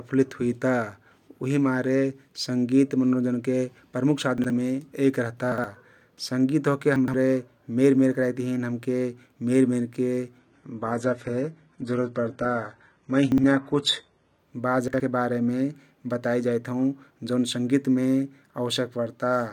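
Five times in this speech recording, a 60 ms chunk of audio arrived late and played out of order, after chunks that should have followed it: at 4.38 s just before "महती एक रहता", at 5.52 s just after "महती एक रहता", and at 6.96, 13.32 and 14.88 s. The one at 6.96 s is two chunks late, the rest one. Nothing is missing, but each misplaced chunk leaves hard joins, heard as a brief jumbled stutter.

From 10.39 to 14.39 s, an adaptive stream switched to a lower bitrate for four seconds because the connection slowed. The rise in codec artefacts points to a drop from roughly 96 kbit/s AAC-LC to a 16 kbit/s HE-AAC version. Nothing above 11.8 kHz remains in that stretch. The drop in quality starts and ends abruptly with no gap, and the out-of-order chunk at 13.32 s falls inside it.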